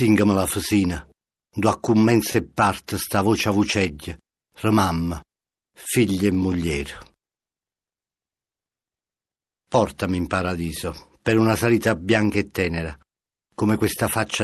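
Speech, with overlapping chunks causing a small stutter at 2.32–2.35 s, 6.35–6.37 s and 10.37–10.39 s. Each glitch replays about 21 ms of audio, and they land every 4 seconds, which points to the audio being handled in 4-second chunks where each new chunk starts slightly before the previous one ended, so the overlap plays twice at the seam. The top end stops around 12 kHz, which fits a call-style Opus path.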